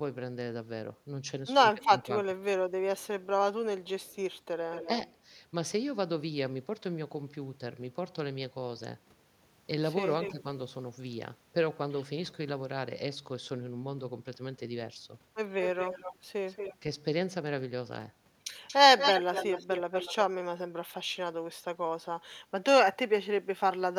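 From 1.83 to 5.07 s an echo leak returns a copy of the speech about 300 ms late and well below the talker. The likely cause is a far-end loudspeaker whose echo canceller passed its own microphone pickup back. On a spectrogram the harmonic bands repeat as a fainter, time-shifted shadow. Inside that stretch, at 1.95 to 2.1 s, speech is suppressed in double talk. The talker drops by around 10 dB for a fraction of a second, likely because the canceller turned down both sides at once. The waveform shows a brief notch in the envelope.

The echo comes back at 10.08 to 10.32 s, now 230 ms late and louder. Speech is suppressed again at 10.28 to 10.45 s, but the dip is shallower.

A further echo runs from 15.62 to 16.76 s and is followed by a very short dip at 16.79 to 16.85 s.

The last echo, from 18.67 to 20.15 s, is also delayed 230 ms and sits close to the level of the speech. Its offset copy is plainly visible on a spectrogram.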